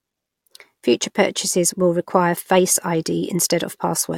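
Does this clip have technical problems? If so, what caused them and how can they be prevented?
No, nothing in this speech recording points to a technical fault, so there is nothing to trace or prevent.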